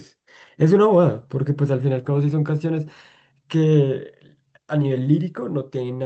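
No technical faults are audible.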